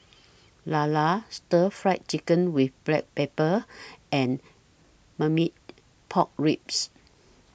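No technical faults can be heard at any point in the speech, so there is nothing to place in time order.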